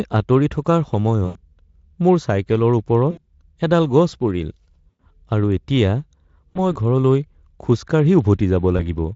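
VoIP packet loss concealed by the speech codec occurs at 1.25–1.44 s after "আঁতৰি থকাৰ", 3.11–3.21 s after "মোৰ চাইকেলৰ", 4.89–5.07 s, 6.53–6.75 s and 8.77–8.96 s. The Speex decoder stretches its last pitch and filter into a fading buzz over gaps of 100, 60, 100, 20 and 20 ms, and the speech stays thin briefly afterwards.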